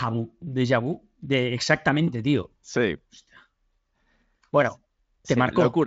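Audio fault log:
No faults are audible in this speech clip. The Speex coding leaves at most faint traces, and nothing comes through above about 7.7 kHz.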